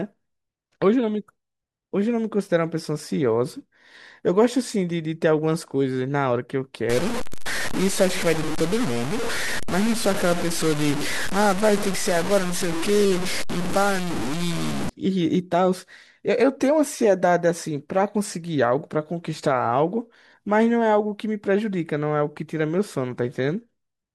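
From about 6.89 s to 14.89 s the speech turns grainy and harsh, with a distortion that rides along with the voice and gets grittier as it quiets down, while the softest bits sputter or drop out. That's low bit depth without dither, likely the audio being truncated to something like 4 bits. With so few steps, the rounding error tracks the signal and sits only about 10 dB below it.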